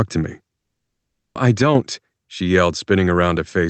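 Just after "to me", at 0.57 s, the speech cuts out completely. Nothing is heard until 1.37 s, a gap of about 0.8 s. This is likely a long network dropout. No packets reached the receiver for that stretch, so about 780 ms of audio was never played. Silence fills the hole. When the speech resumes, it picks up further along, and the lost part is simply gone.

From 1.62 s to 1.75 s, the level suddenly drops by about 6 dB, then returns. That is roughly 130 ms. The likely cause is one channel dropping out of a stereo feed. Once the two sides are summed to mono, losing one halves the shared signal, which is the 6 dB step heard here. The drop is abrupt at both edges. The call path's coding adds its usual coding noise throughout, with content stopping near 8 kHz, which fits Opus at a modest bitrate.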